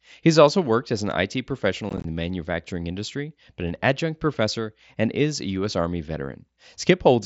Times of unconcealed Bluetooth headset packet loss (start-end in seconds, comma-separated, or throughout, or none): 1.89-2.05